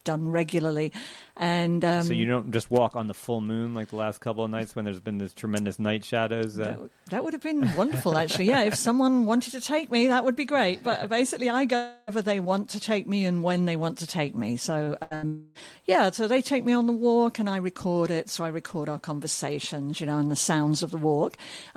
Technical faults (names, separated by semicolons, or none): long network dropout; short concealed packet loss; burst of packet loss